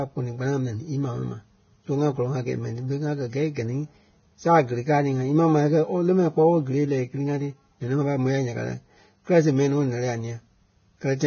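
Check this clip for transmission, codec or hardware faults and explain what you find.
The speech carries one fault throughout all 11 seconds: likely Vorbis compression at a low bitrate, around 17 kbps. Nothing survives above 6.6 kHz, and the treble that remains is quantised so coarsely that fine detail turns into grainy hiss, roughening the tone and blurring consonant attacks. A spectrogram shows a hard ceiling at 6.6 kHz with mottled, noisy patches below it.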